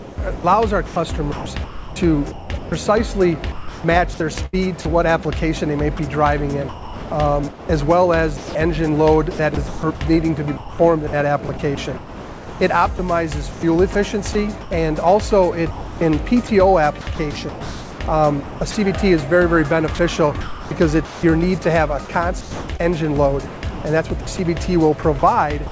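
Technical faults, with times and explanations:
0.00–2.72, 3.52–4.85, 5.97–14.71, 15.71–18.75, 19.95–21.23 and 22.05–25.71 s: sound chopped by the voice detector. Quiet edges drop to comfort noise, likely from the sender's voice detector gating. Content above 8 kHz is absent, which fits the G.722 call codec.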